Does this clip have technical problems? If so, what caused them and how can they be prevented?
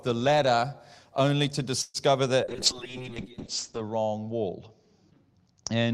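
Yes. A call audio freeze starts at 1.81 s, just after "the ladder only to", and lasts until 1.97 s. The last sound is carried on as a short fading buzz, with only a brief moment of silence. The likely cause is delayed packets draining the jitter buffer, so the receiver filled the wait itself. About 0.13 s was inserted. Nothing was lost, and everything after it arrives that much later. A jitter buffer with more headroom on an unstable link would prevent this.

A call bitrate drop begins at 2.48 s and runs to the end of the clip. The bandwidth estimate fell, and the encoder went from 32 kbps down to 7 kbps, staying at its lowest for 1.33 s. At that rate the coding turns coarse and watery. The top end is also cut, with bandwidth shrinking from 20 kHz to 8 kHz, so the speech sounds muffled. A steadier network path, or a higher minimum bitrate on the encoder, would prevent this.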